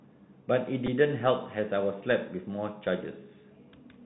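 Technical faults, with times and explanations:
throughout, Bluetooth CVSD headset codec. The speech has the narrow, boxed-in sound of a Bluetooth headset link, which fits CVSD at 64 kbps. Each sample is coded as a single up-or-down bit, and the step size adapts. Nothing above 4 kHz gets through, so the speech loses its brightness. Loud, fast-rising sounds outrun the step and break up. S sounds turn scratchy, and a grainy hiss sits under the speech. The damage is plainly audible.
0.87 s, repeated buffer. A tiny slice of the sound plays several times in quick succession, with a hard join at each repeat. New audio was late, so the device replayed its last buffer instead. The whole event lasts only about 15 ms. The repeated piece is very short, which points to a buffer of about 5 ms. It comes across as a brief click or buzz rather than a stutter. Little or no audio is lost.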